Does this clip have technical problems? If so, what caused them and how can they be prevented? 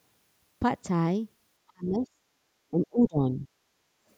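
Yes. The speech gets ducked hard from 1.72 to 2.18 s and from 2.71 to 3.48 s, by about 30 to 35 dB. That's speech suppressed in double talk, likely an echo canceller mistaking the talker for far-end echo. Better double-talk detection or headsets would prevent it.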